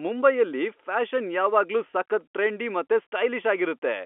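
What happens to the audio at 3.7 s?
Nothing goes wrong at 3.7 s; the speech passes intact through the narrow telephone band of the G.711 coding, with no dropout, click or distortion at that moment.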